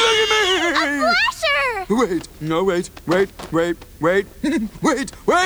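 A constant, even hiss runs through the whole clip, roughly 35 dB below the sound: low bit depth with dither, at 8 bits. Dither before rounding turns the quantisation error into steady white noise, so unlike undithered truncation there is no grainy distortion that tracks the sound.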